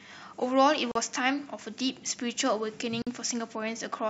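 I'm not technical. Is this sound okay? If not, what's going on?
No. The speech was saved in separate pieces and stuck back together without trimming the padding each piece carries, a gap at a join of encoded pieces. You hear brief silences cutting in at 0.92 s (39 ms) and 3.02 s (48 ms), then the speech resumes where it stopped.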